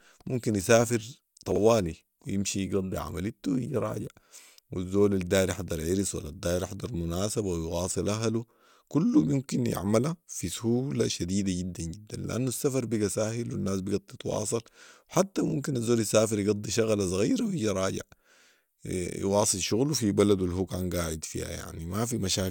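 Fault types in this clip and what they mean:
Chunks out of order: a short block of speech, about 21.33 ms long, plays after the blocks that should follow it. At 1.52 to 1.58 s it lands two chunks late, and at 14.32 to 14.36 s one chunk late, giving a brief jumbled stutter. On the waveform the phrase shows abrupt steps at each swapped boundary, and the spectrogram shows thin vertical broadband lines with harmonics jumping discontinuously.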